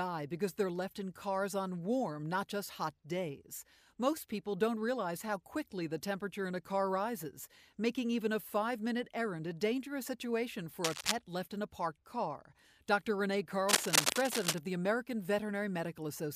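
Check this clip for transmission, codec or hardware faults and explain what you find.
Two bursts of cable scratch noise are present, from 10.84 to 11.12 s and from 13.69 to 14.60 s. Each is a dense, ragged crackle over the sound. The first is about as loud as the signal; the longer second burst rises somewhat above it. The likely cause is a worn cable, connector or control being moved, so its contact resistance jumps around rapidly. On a spectrogram each burst shows as a broadband smear of irregular vertical streaks, and the waveform shows clustered spiky excursions.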